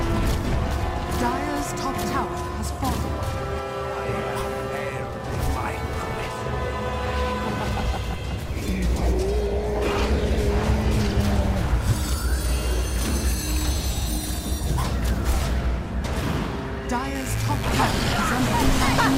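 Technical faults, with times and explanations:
17.15–19.18 s, mains buzz: a steady, raspy buzz enters and runs to the end, sitting roughly 15 dB below the sound. Sharp switching spikes, of the kind a dimmer, rectifier or unshielded cable lets in, arrive twice per cycle of a 50 Hz supply, so their energy spreads across many harmonics. On a spectrogram this shows as evenly stacked horizontal lines at 50 Hz multiples reaching up to several kHz. The waveform carries a regular comb of narrow spikes every 10 ms.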